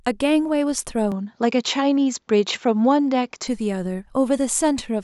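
Speech, with a stretch from 1.12 s to 3.48 s where the sound abruptly loses its top end, with nothing above 7.5 kHz, and takes on a different tone and a faint new background noise sitting far below the speech. The level stays about the same and there is no gap at either transition, with full bandwidth returning at 3.48 s. This is likely an input switched to a poorer device, a narrower-band microphone carrying its own coloration and noise floor.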